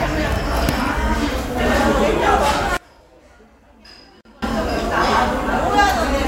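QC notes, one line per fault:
2.77–4.42 s, one channel inverted: one stereo channel likely has flipped polarity, so shared content cancels when summed to mono, falling about 27 dB to a faint residue.
4.21–4.25 s, gap at a join of encoded pieces: separately encoded segments were joined without trimming encoder delay and padding, leaving a 42.5 ms gap with smeared edges before the sound resumes where it stopped.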